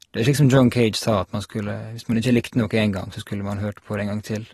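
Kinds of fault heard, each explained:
AAC compression: plainly audible coding smear on the speech and nothing above 13.8 kHz, likely from an AAC-LC encode that fits a 32 kbps stream.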